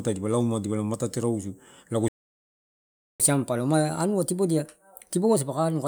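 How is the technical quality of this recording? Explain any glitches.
The recording has two linked glitches: a stall and then a sped-up recovery.

A playback stall runs from 2.08 to 3.20 s, right after "rausu lago". The player likely ran out of buffered data or had its thread blocked, so output stopped. The speech cuts off mid-flow into about 1.1 s of silence before resuming.

Catch-up at higher speed follows from 3.20 s to the end. To recover the lost time, the player resamples its backlog at 1.15 times normal speed. Because speed and pitch rise together, the speech after "rausu lago" sounds hurried and about two semitones higher.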